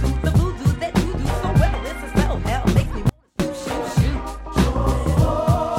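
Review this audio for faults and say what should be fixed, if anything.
Audio dropout to a faint residue from 3.09 to 3.40 s: the signal abruptly collapses to a faint leak about 35 dB down, likely from a momentarily broken connection. On a waveform it shows as a sudden near-flat gap; on a spectrogram, a dim vertical band with hard edges. Secure cables and connectors, and monitor the input during recording, so the signal path cannot briefly drop out.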